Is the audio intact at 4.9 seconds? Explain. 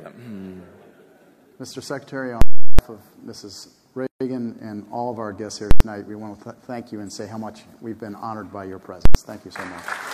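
Yes, the audio is intact at 4.9 seconds, with no fault audible at that moment.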